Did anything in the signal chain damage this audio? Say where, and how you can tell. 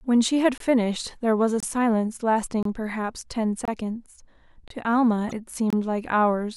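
Yes, two problems. The first is a gap between chunks, at the storage or playback stage. Hard-edged holes of about 25 ms interrupt the speech at 0.58, 1.60, 2.63, 3.65, 4.68 and 5.70 s, one every 1.0 s. That strict one-second spacing points to audio handled in 1 s chunks, with silence left at each join by codec padding or a player starting each chunk late. The content is not lost, only split apart.

The second is a disturbance from 5.29 to 5.33 s, about 40 ms long, at the codec stage, likely a broken MP3 bit reservoir. MP3 frames borrow bits from earlier frames, so when frames go missing, the next frame decodes against bytes belonging to another frame and the audio jumps ahead with a short garbled patch. The damage spans roughly one to two frames of about 26.1 ms, which fits standard MP3 framing.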